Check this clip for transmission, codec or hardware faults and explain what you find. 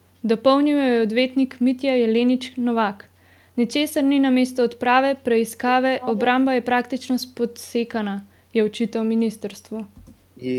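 One fault can be heard, an echo leak. From 6.00 to 6.22 s, a faint delayed copy of the speech sits behind the direct signal. It trails the original by 314 ms and is roughly 10 dB quieter. The likely cause is a far end playing the call through a loudspeaker, where the echo canceller missed part of what its microphone caught. That leftover was sent back. It is heard as a brief repeat of the speech.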